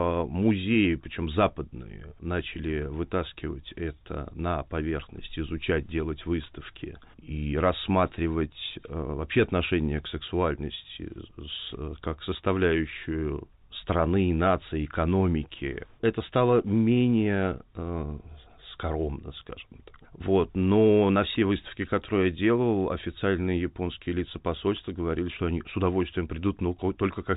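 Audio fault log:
The speech sits within a telephone-band channel that cuts off everything above 4 kHz, consistent with A-law G.711 coding at its usual rate, with nothing further in the signal calling for comment.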